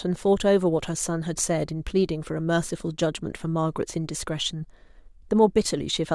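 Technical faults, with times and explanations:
Nothing in this speech recording stood out as a technical problem on listening.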